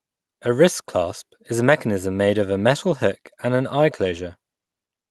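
No faults present; the speech carries the ordinary coding texture of a call path, with content rolling off above roughly 12 kHz, which fits a super-wideband Opus stream at a moderate bitrate.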